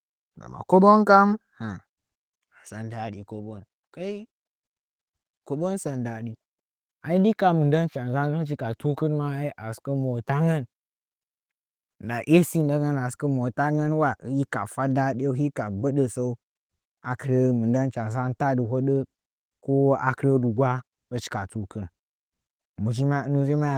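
No technical faults can be heard anywhere in this speech recording. The Opus voice compression is audible only lightly, with the full band kept, which fits a hybrid-mode stream at around 24 kbps.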